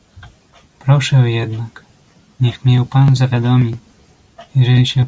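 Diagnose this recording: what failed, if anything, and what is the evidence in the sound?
No fault detected anywhere.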